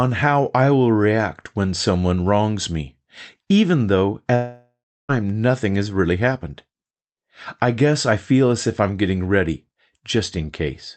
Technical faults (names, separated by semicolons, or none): long network dropout